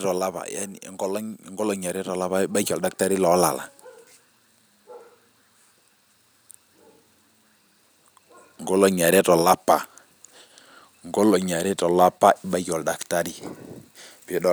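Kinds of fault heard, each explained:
Automatic gain falling: at the very start, from 0.05 to 0.88 s, the gain control judges the speech input too hot and pulls its gain down by about 4 dB, so the voice and the room background sink together instead of the level holding steady.
Automatic gain rising: from 0.98 to 3.6 s the gain control swings the other way, treating the input as too quiet and raising gain by about 11 dB over roughly 2.6 s, so speech and background swell upward together in a slow, audible ramp.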